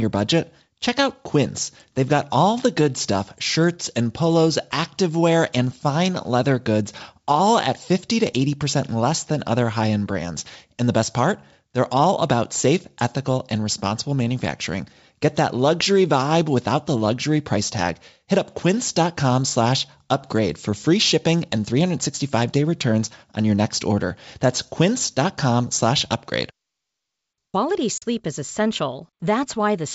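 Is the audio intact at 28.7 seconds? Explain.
Yes, the audio is intact at 28.7 seconds, with nothing there beyond the G.722 wideband telephone coding at 64 kbit/s that runs under the whole clip and leaves at most a faint trace.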